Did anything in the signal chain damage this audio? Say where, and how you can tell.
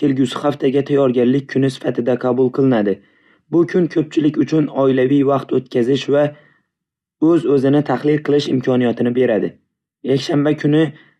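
No, nothing along the chain seems to have touched this speech recording, so I don't hear any damage to point to.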